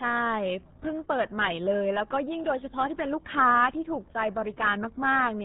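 Throughout, RealAudio 14.4 codec damage is heavy: nothing passes above 3.8 kHz, and the speech sounds muffled and gargly, consistent with an 8 kbit/s dial-up speech codec.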